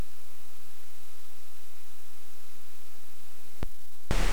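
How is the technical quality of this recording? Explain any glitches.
There's one glitch worth flagging: a single sharp click at about 0.85 s. That's dropped samples, likely a tiny fraction of a millisecond missing from the stream, so the waveform jumps straight to a later value. Nothing audible is lost, just that brief tick, which would show as a thin vertical line across the spectrum.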